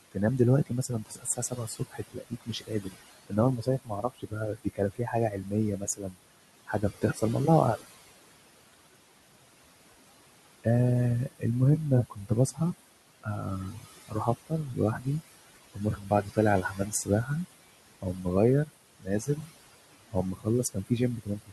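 Speech recorded over room noise sitting about 15 dB below the voice carries noise suppressor artifacts throughout. The suppressor pulls the noise down by about 20 dB frame by frame, so the background drops away between phrases and swells back under the voice. That breathing, level-tracking behaviour separates it from codec warble, which does not follow the pauses. Speech cut by the noise suppressor occurs at 0.12–7.23 s (roughly three seconds affected), 11.26–11.44 s, 12.1–12.6 s, 13.23–15.07 s, 15.74–17.3 s, 18.02–19.51 s and 20.1–21.52 s. Quiet consonants and word endings are dragged down by as much as about 21 dB, so they sound swallowed. Unlike packet dropouts, nothing goes silent or clicks; the soft parts simply fade into the suppressed background.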